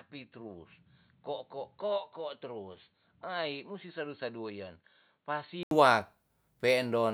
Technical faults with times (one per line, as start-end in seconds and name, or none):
0.00-5.71 input switched to a poorer device